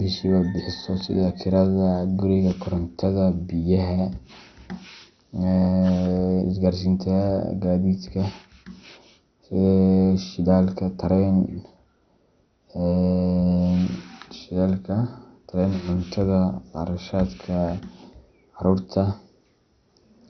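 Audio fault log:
throughout MP2 compression, likely: the speech is dull, with nothing above 6.2 kHz and a heavy gurgling, granular texture as starved upper sub-bands switch off and flicker, which fits about 48 kbps.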